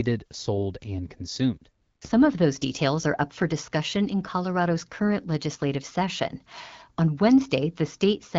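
From 1.81 to 2.01 s, right after "sold and consumed", AMR comfort noise fills a 200 ms pause with smooth synthetic hiss. It shows as a flat, featureless band on the spectrogram.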